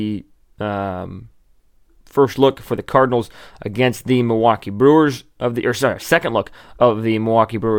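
No technical faults are audible.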